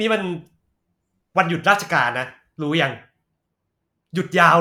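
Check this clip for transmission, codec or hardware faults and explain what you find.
No technical fault can be heard anywhere in the recording, and the speech signal stays continuous and intact throughout.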